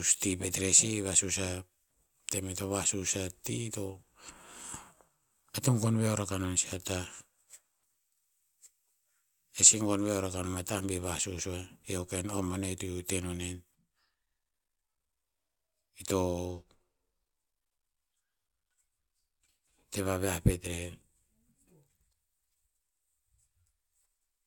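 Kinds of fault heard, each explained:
No technical faults can be heard in this recording.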